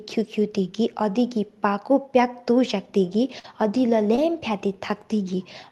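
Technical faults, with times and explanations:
3.39–3.46 s and 4.16–4.19 s, short concealed packet loss: each spot has a brief smear or wobble where the sound carries on unnaturally. Roughly 40 ms and then 20 ms of audio arrived too late to decode, so the receiver stretched the preceding sound across each gap before blending back.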